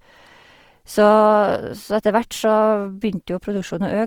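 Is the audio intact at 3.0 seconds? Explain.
No, Opus compression runs through the whole clip, including 3.0 s. Starved band energies in CELT mode are filled with folded or noise content, likely at a rate near 24 kbps, leaving the speech grainy and rough up to 20.2 kHz.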